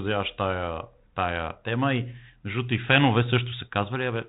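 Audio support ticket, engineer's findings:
Speech path through G.726 ADPCM at 32 kbit/s, with nothing passing above about 3.9 kHz and only light coding grain, as expected for that rate, and no faults found.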